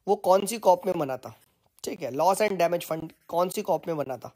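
Short hard-edged holes of about 20 ms break up the sound at 0.40–0.42, 0.92–0.94, 1.44–1.46, 1.96–1.98, 2.48–2.50, 3.00–3.02, 3.52–3.54 and 4.04–4.06 s. It's a classic gap between chunks: each half-second chunk plays whole, but a bit of silence is wedged in at every join. That gives a steady stutter every 0.52 s.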